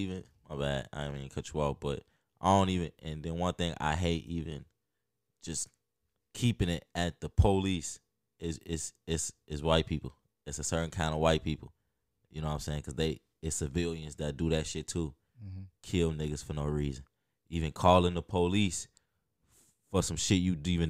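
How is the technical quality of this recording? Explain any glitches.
No technical faults are audible.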